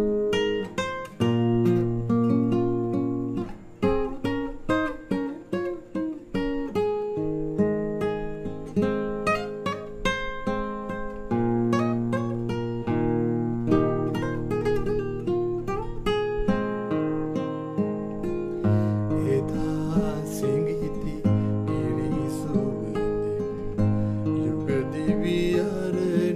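No technical faults can be heard anywhere in this recording.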